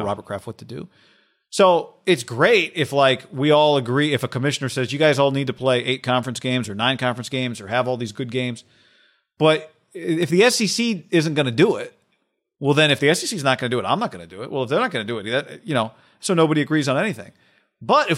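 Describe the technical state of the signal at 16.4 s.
At 16.4 s the signal is intact, with no audible dropout, distortion, clipping or other technical fault at that moment.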